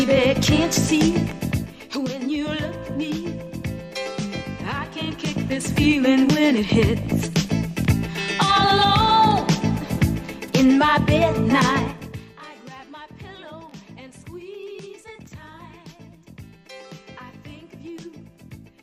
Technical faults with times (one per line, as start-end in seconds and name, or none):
1.16-1.96 zipper noise
5.00-5.84 zipper noise